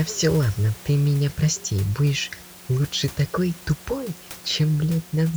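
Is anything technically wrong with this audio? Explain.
No, nothing here points to a technical problem; the only background is the room's own noise, sitting about 21 dB below the speech, which belongs to the recording space rather than the signal chain.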